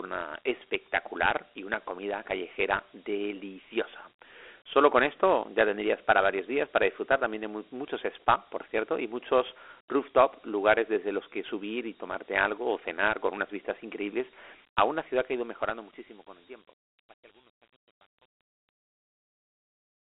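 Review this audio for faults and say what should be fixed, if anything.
The whole recording was passed through Dialogic VOX ADPCM coding, a 4-bit scheme whose coarse steps, fitting a 32 kbps stream, leave plainly audible gritty hiss trailing the speech. Telephone-style band-limiting confines it to roughly 300 Hz to 3.5 kHz, with nothing above 3.8 kHz, so it sounds thin and muffled. To prevent the coding damage, capture and store the source as linear PCM at a wider sample rate, and convert to VOX only for delivery.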